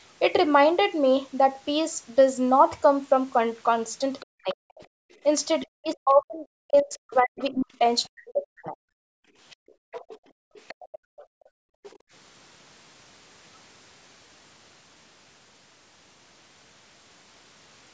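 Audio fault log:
4.2 to 4.55 s, 5.12 to 5.67 s, 7.39 to 7.5 s and 9.5 to 11.99 s, other side's voice leaking through: a faint second voice, some 25 to 30 dB under the main talker, sneaks in, likely loudspeaker playback the echo canceller didn't fully scrub from the mic.
4.3 to 4.85 s and 5.74 to 8.78 s, speech suppressed in double talk: the talker dips hard, as deep as 40 dB or so, for roughly half a second and then about two seconds, likely because both ends talked at once and the canceller ducked everything.
9.06 to 12.11 s, background gated by the echo canceller: the room sound drops out by about 36 dB for around two seconds in total while the far end plays, as the canceller clamps the mic and only releases once playback stops.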